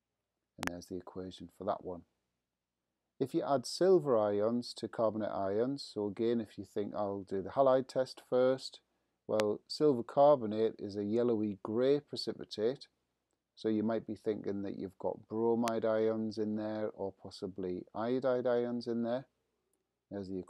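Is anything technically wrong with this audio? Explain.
Yes. There are loud pops at three points: a double pop from 0.63 to 0.69 s, then single pops at 9.40 to 9.42 s and 15.68 to 15.70 s, peaking roughly 20 to 25 dB above the surrounding level. Each is a sharp thump laid over the sound, which continues unbroken beneath it, so these are not dropouts or gaps. The likely cause is a sudden voltage step from a plug, switch, static or driver glitch, briefly reshaped by the downstream circuitry.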